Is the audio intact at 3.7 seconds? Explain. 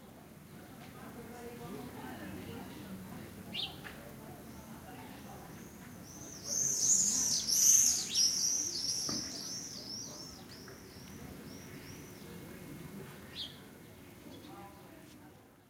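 Yes, the sound at 3.7 s plays through cleanly, with no dropout, click, distortion or other technical fault at that moment.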